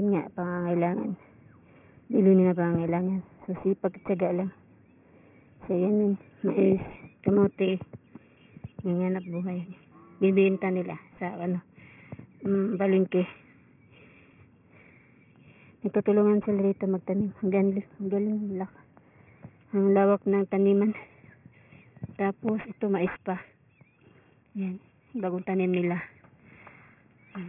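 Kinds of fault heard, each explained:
Aliasing: the top end sounds gritty and metallic, with false tones roughly 20 dB down, likely because content above 3 kHz folded back after resampling without filtering.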